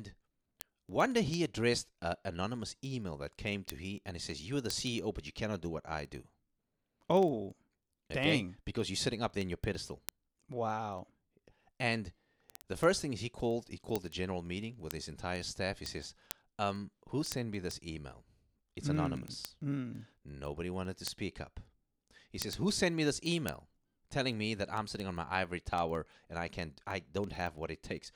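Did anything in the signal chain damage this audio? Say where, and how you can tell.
Yes. Sharp ticks of uneven strength run through the speech at a steady rate of about twenty per second, from 0.11 s to 28.14 s. These are word clock ticks: a digital link read by an unlocked device, its clocks off by several hundred ppm, drops or repeats one sample.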